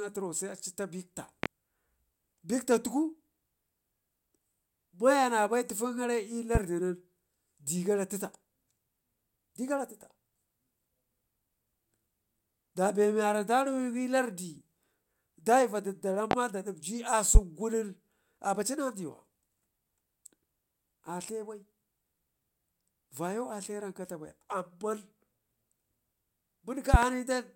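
You'll hear a loud pop at 1.43–1.47 s, again at 6.55–6.59 s, then two hard ones at 16.31–16.35 s and 17.35–17.39 s, and finally a double pop at 26.94–27.06 s. Each is a sharp thump jumping about 15 to 25 dB above the speech, which carries on underneath. The likely cause is a sudden voltage step or spike, from a plug, switch, static or driver glitch, getting added to the signal.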